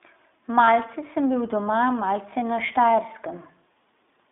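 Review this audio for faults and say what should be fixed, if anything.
Throughout, the speech sounds boxed-in and a little rough and synthetic, confined to a band of roughly 250 Hz to 3.6 kHz. This is the iLBC codec: a narrowband VoIP coder that encodes each frame's excitation independently, consistent with 20 ms frames in its 15.2 kbps mode.

From 0.64 to 0.69 s, a 40 ms stretch turns into a held, slightly buzzy vowel-like sound. These are lost iLBC frames, which fits two dropped 20 ms packets. The decoder filled the gap by repeating the last pitch cycle mixed with noise. Because each frame stands alone, the voice is right again almost at once afterwards.

To prevent both, use a wideband codec such as Opus on a network path with less packet loss, adding forward error correction or redundancy to cover dropped packets.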